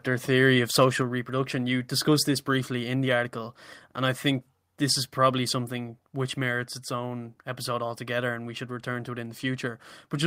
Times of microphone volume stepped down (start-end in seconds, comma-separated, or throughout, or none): 1.02